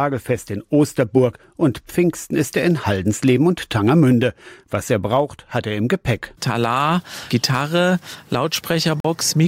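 A Bluetooth stall, most likely from wireless interference, briefly starves the playback buffer at 9.00 to 9.05 s. When packets are held up in transit, the receiving end has nothing queued to play and must wait for the delayed data before continuing. Here that wait produces a sudden dropout of about 44 ms, a clean gap of silence that interrupts the sound abruptly, after which the audio picks up again without any fade.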